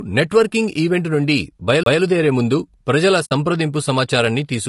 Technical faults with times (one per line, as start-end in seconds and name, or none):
0.00-4.69 low-delay AAC compression
1.83-1.86 CD skip
3.25-3.32 AAC frame loss with muting